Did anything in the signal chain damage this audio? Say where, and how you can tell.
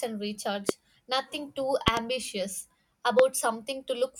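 Yes, three loud pops sit on the speech at 0.69–0.71 s, 1.88–1.99 s (a double pop) and 3.19–3.22 s, peaking about 20–25 dB above it. Speech runs unbroken beneath them, unlike a dropout. They are likely voltage transients in the analogue wiring or driver stage.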